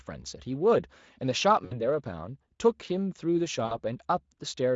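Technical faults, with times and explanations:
1.65–1.83 s and 3.65–3.76 s, VoIP packet loss concealed by the speech codec: about 60 ms of speech goes missing each time, which fits three 20 ms frames. The Speex decoder fills the gap by extending the last pitch and spectral shape at falling gain, so the speech is stretched into a buzzy tone or coloured noise that fades, then sounds weak and smeared for a short while after the stream resumes.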